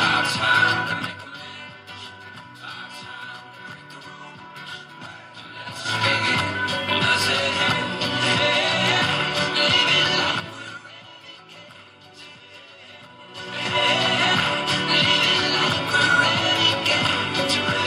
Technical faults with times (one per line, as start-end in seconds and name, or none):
13.10-13.84 zipper noise